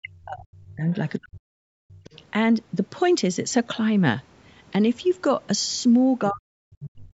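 The speech clip has speech suppressed in double talk at 0.00–0.87 s, 1.19–1.68 s, 1.94–2.05 s and 6.30–7.14 s. The voice sinks by around 40 dB (about 20 dB in the short 1.94 s dip), likely because the echo canceller clamped down while both sides spoke at once. On a waveform these show as sudden hollowed-out envelopes, and a spectrogram shows dark gaps across the band. The other side's voice leaks through at 0.91–1.10 s, 2.04–2.22 s and 6.83–6.90 s, likely residual loudspeaker echo that the canceller missed. The first two are faint, far below the talker. The last is noticeably stronger. A spectrogram shows them as harmonic traces that don't line up with the main voice.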